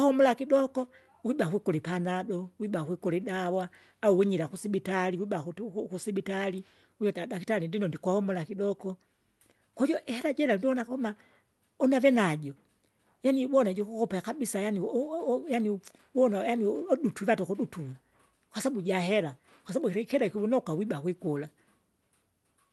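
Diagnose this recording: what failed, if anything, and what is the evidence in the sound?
Nothing stood out on listening to this speech clip, which came through a call path whose Opus coding leaves the top end rolled off at around 12 kHz, consistent with roughly 32 kbps.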